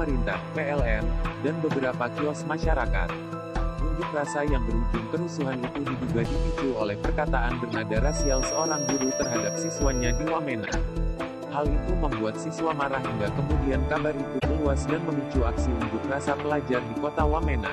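The whole clip has a watery, swirling quality, with dulled treble and smeared attacks. This is likely MP3 compression at a low bitrate, around 64 kbps. Starved of bits, the encoder cuts the top end and lets weak detail flicker between frames. Four runs of corrupt frames decoded anyway add short chirps and noise bursts at 7.69 to 7.78 s, 9.22 to 9.25 s, 10.65 to 10.74 s and 14.39 to 14.45 s. Each one spans a few damaged frames. The decoder played wrong gains or misread codes, so energy lands at wrong frequencies. The bursts peak between about -20 and -10 dBFS, and the last is loudest. From 8.00 to 10.28 s a thin, steady feedback whistle sits at 5.6 kHz, about 10 dB below the sound. Its level swells and fades slowly. It is likely a speaker-to-microphone loop held just short of runaway.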